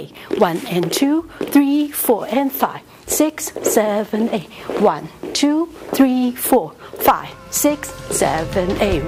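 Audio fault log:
Nothing stood out on listening to the clip.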